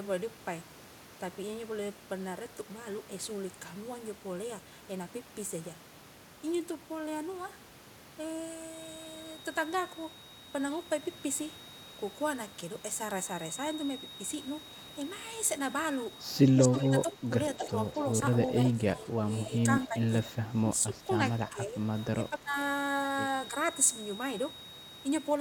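From 8.6 s to the end, a thin, steady whistle at 3.8 kHz sits about 20 dB below the speech, swelling and fading slowly. It is a feedback whistle, likely from a loudspeaker-to-microphone loop held right at the edge of feedback.

Between 16.56 and 17.71 s, and again from 18.72 to 21.02 s, 21.49 to 21.8 s and 22.14 to 22.57 s, the talker's voice dips by up to about 15 dB, later only about 10 dB. This is speech suppressed in double talk, likely an echo canceller ducking both sides while they spoke at once.

At 17.55 to 17.68 s and 18.65 to 18.7 s, brief scraps of the voice return about 15 dB down, delayed by 262 ms. This is echo leak, likely far-end loudspeaker pickup that the canceller failed to remove and sent back.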